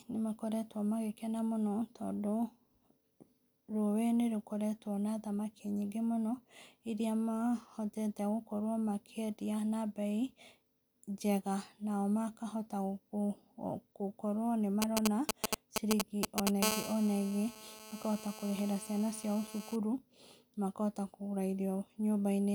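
Speech carries a galloping dit-dit-dit of short 217 Hz buzzes, a little louder than the voice, from 14.82 to 16.49 s. These GSM signalling bursts come from a nearby 2G phone whose radio pulses the audio circuit rectifies. From 16.63 to 19.76 s a steady, hard, raspy 217 Hz buzz rich in harmonics sits about 9 dB below the speech. This is GSM phone buzz, from a phone transmitting in bursts 217 times a second during a call.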